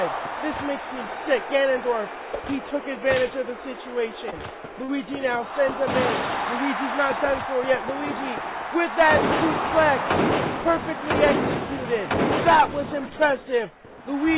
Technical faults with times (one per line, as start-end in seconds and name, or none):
4.30-4.42 short concealed packet loss